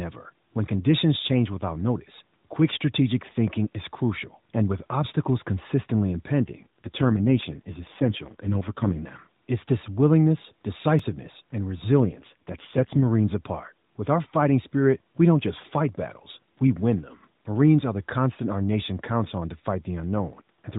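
Speech carried over an AMR-NB narrowband mobile link, so nothing above 4 kHz passes. Twice the network apparently forced an AMR rate drop, from 6.44 to 8.99 s and from 12.01 to 13.06 s, consistent with a fall from 12.2 to about 4.75 kbps. With far fewer bits for the vocal-tract model, the voice turns rough, buzzy and synthetic in those stretches, with no change in bandwidth and no gap, then clears when the rate recovers. At 10.99 s a block of digital silence, about 2.5 ms long, appears, likely because the output buffer was not filled in time. The abrupt cut out and back is too short to be heard as silence and comes through as a brief tick or dip.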